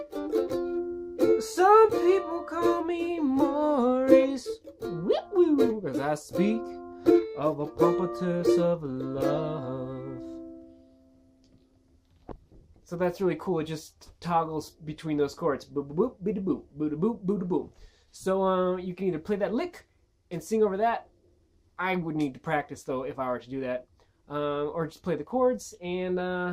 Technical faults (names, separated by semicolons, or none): none